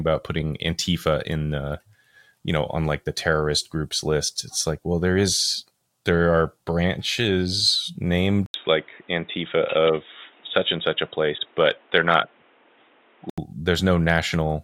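At 8.46 s, just after "is there are branches", the speech drops out for about 80 ms. When it returns, nothing above 3.8 kHz gets through. The sound turns dull and boxy, and a faint new background noise sits well under the speech. Loudness stays about the same. This is likely an input switched to a poorer device, such as another microphone or a headset's call profile. At 13.38 s the full, clearer sound returns.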